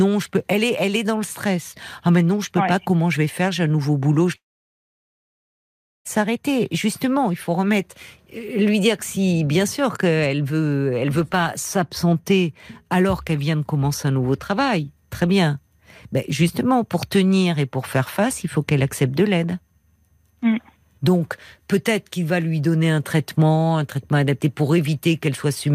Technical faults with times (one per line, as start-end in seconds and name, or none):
4.35-6.07 long network dropout